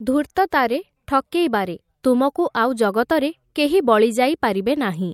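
Pre-echo at 0.35, 0.50 and 2.03 s in this speech: each sharp onset is preceded by a 12 to 19 ms hiss, about 14 to 16 dB up, as a transform codec spreads quantisation noise across what sounds like a 26 ms block, never switching to short blocks.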